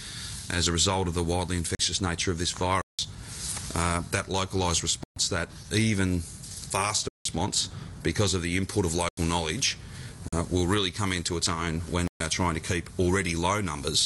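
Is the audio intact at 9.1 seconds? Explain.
No. At 9.09 s the sound drops into a block of digital silence lasting about 85 ms, until 9.17 s. Samples were zeroed, which fits a 4096-sample buffer left unfilled in time. The abrupt cut and return are heard as a short hole.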